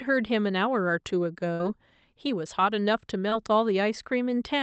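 Speech carried over a call codec, with high frequencies cut off at 8 kHz as a wideband Opus path would do. At 1.53 to 1.61 s the sound stretches into a fading held sound and then resumes further on. This is a burst of packet loss: about 60 ms was concealed by extending the last sound, and about 60 ms of speech is gone. At 3.29 to 3.33 s a brief smear replaces the audio, a short concealed packet loss where roughly 20 ms failed to arrive and was patched from the preceding sound.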